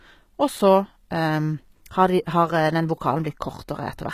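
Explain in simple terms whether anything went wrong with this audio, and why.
Yes, something went wrong, and it lasts the whole clip. The speech has plainly audible damage that sounds like HE-AAC compression, likely from squeezing the file very small. This kind of coding keeps only the lower sounds properly. It then fakes the high, crisp part by copying lower sounds upward. That fake treble never quite matches, so s sounds come out gritty, lispy or metallic. Nothing at all is left above about 14.9 kHz.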